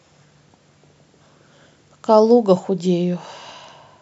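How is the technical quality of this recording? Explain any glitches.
No technical faults can be heard in the recording, and the signal stays steady and intact throughout.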